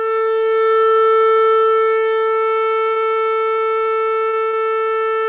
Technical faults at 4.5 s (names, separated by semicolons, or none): short concealed packet loss